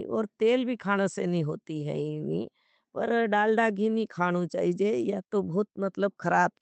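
No technical faults can be heard anywhere in this recording.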